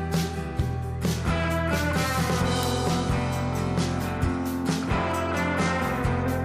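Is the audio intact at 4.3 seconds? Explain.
No. Word clock ticks run from 0.15 to 6.18 s. An unlocked receiving clock, off by roughly 70 ppm, slips one sample about every 0.4 s, causing steady, sharp ticks.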